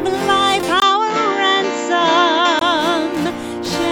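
At 0.8 s a brief 20 ms gap appears. The sound turns duller, with nothing above 7.6 kHz and a faint new noise floor, but no clear level jump. This is likely an input switched to a poorer device. Full clarity returns at 2.61 s.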